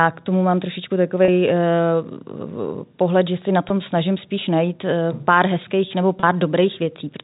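Around 1.25 s, right after "k tomu mám trošičku", roughly 30 ms of speech drops out, and the receiver bridges it by repeating the last pitch period, so you hear a brief held, buzzy note. That's packet loss with pitch repetition. It happens again at 3.69 s, a 10 ms gap between "pohled že si na" and "snažím spíš najít pár". At 6.2 s there's another 30 ms gap after "najít pár hezkých nebo". The gap sizes fit 10 ms packets, and the whole thing rides on band-limited G.711 telephone coding.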